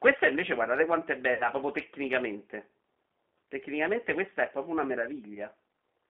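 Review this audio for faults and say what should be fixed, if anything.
The whole clip is coded with the G.729 codec at 8 kbit/s. The speech is band-limited to about 250 Hz–3.4 kHz and has the rough, synthetic texture of an excitation model built from a few pulses per frame. Carrying the call on a wideband codec would prevent this.

There is VoIP packet loss concealed by the speech codec at 1.34–1.49 s, between "invece guardate quanto è" and "proprio tecnicamente". About 60 ms is missing, which fits three lost 20 ms packets. A second gap at 5.34–5.42 s follows "questa è proprio una" and fits a single 20 ms packet. In both places the decoder stretches its last pitch and filter into a fading buzz or coloured noise, and the voice stays distorted briefly after the packets resume. Adding forward error correction or redundancy and a larger jitter buffer would reduce these losses.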